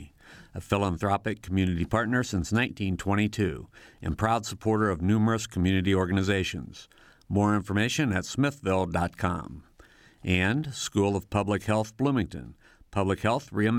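No technical faults can be heard anywhere in the speech recording; the signal stays continuous and stable from its opening moment to its last.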